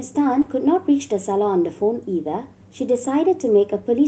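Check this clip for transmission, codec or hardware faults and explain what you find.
One transmission fault stands out in the speech, heard over a call path whose spectrum stops near 8 kHz.

At 0.41 to 0.47 s, short concealed packet loss: about 40 ms never arrived, so the decoder extrapolated the previous sound, leaving a brief smear, with smoothed, repeated spectrogram texture before resuming.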